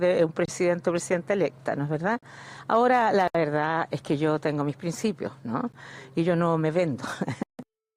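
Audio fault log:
0.45–0.48 s, 2.19–2.23 s, 3.28–3.35 s, 5.72 s and 7.43–7.59 s: block of digital silence. Runs of samples were zeroed with no fade in or out, so the audio drops dead and snaps back. The 14 ms gap reads as a tick, while the 160 ms one is a short hole.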